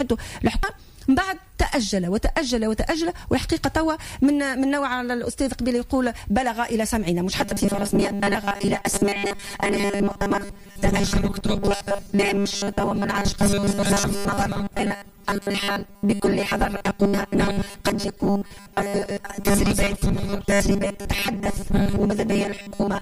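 From 7.39 s to the end, the audio becomes a rigid metallic buzz at 200 Hz. This is robotic sound from repeated short buffers, likely caused by late audio being replaced with roughly 5 ms loops. The spectrogram shows harmonic lines every 200 Hz, and the waveform shows largely repeating cycles, with about 70% of it roughly repeated.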